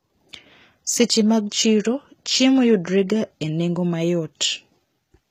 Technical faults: HE-AAC compression

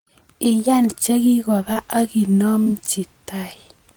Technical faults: short concealed packet loss

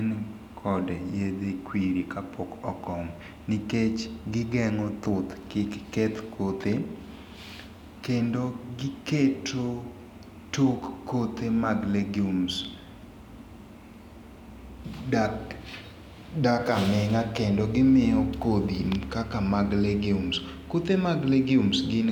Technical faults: none

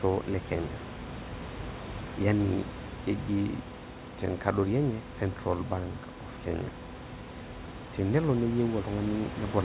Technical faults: none

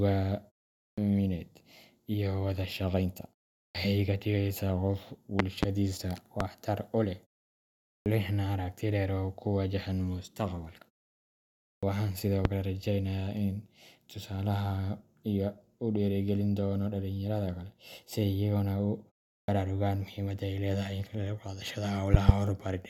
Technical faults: clipped start after a pause; loud pop

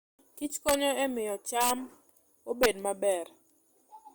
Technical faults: integer overflow

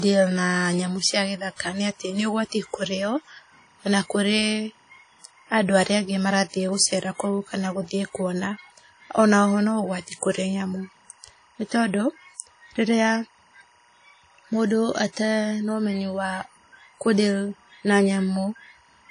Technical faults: timecode bleed; WMA compression

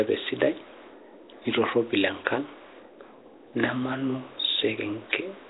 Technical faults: Nellymoser compression

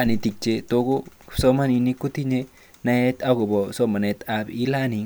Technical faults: none

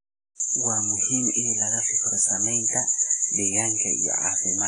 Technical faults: WMA compression

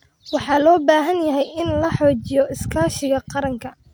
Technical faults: none

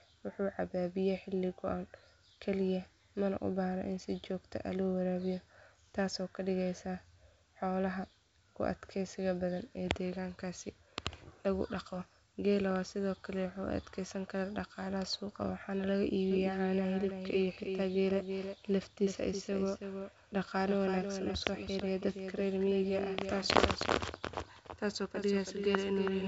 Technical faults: doubled audio track

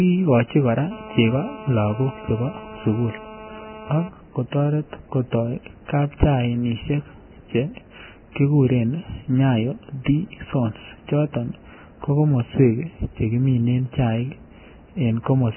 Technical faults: Vorbis compression; GSM phone buzz

